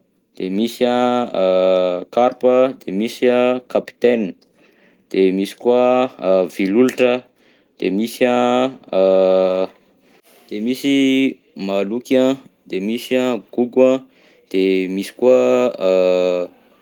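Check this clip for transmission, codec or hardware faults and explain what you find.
No faults can be heard anywhere in this speech recording.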